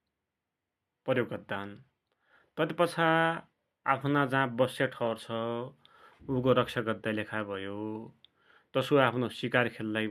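Nothing here trips any alarms, as no technical faults turn up anywhere along this stretch of speech.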